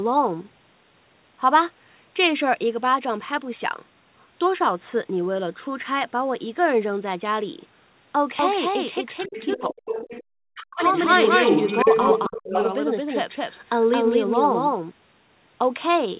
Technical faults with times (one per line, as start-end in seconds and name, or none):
8.39-14.91 doubled audio track
9.20-9.62 other side's voice leaking through
9.26-9.96 speech suppressed in double talk
9.93-10.23 other side's voice leaking through
10.50-10.93 speech suppressed in double talk
10.82-12.66 other side's voice leaking through
12.28-12.54 speech suppressed in double talk